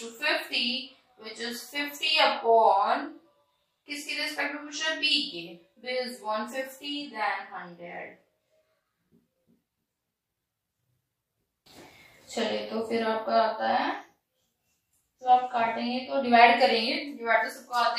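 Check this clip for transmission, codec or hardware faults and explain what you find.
No faults can be heard anywhere in this clip. Nothing in the audio points to trouble in transmission, coding or the hardware chain.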